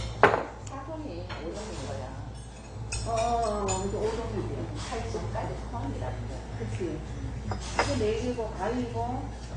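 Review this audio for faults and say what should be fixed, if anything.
Throughout the clip, the sound is dull and smeared, with a plainly audible warbling, fizzy texture on sustained parts. This is likely AAC compression at a low bitrate, which fits about 32 kbps. Unlike a plain low-pass filter, it leaves shifting spectral holes rather than a clean, steady top-end loss. To prevent it, encode the source losslessly or at a much higher AAC bitrate.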